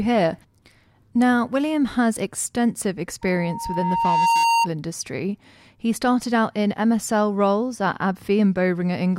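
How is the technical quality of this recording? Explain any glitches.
The recording has one clear fault, a loudspeaker feedback squeal. It runs from 3.21 to 4.68 s. A microphone is hearing the loudspeaker it drives. At one frequency the loop gives back more than it takes, so that tone keeps feeding itself. Here it sits at 925 Hz. It swells over roughly a second into a steady, piercing whistle. At its peak it rides a little above the speech, then stops.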